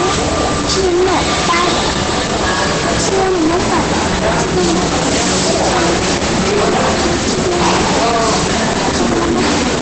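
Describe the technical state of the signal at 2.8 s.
At 2.8 s, as across the whole clip, the level feeding a fixed-range stage overshoots its limit by about 18 dB, so nearly a third of the samples are sliced flat. This is hard clipping: the squared-off peaks spray harmonics upward, turning every loud moment into a harsh, continuous fuzz.

The band also stops dead at 8.7 kHz, and the remaining sound is muffled, hoarse and heavily degraded. That points to likely Opus compression at a very low rate, where the encoder has dropped into its speech-oriented SILK mode and rebuilds the signal coarsely from a narrow wideband range.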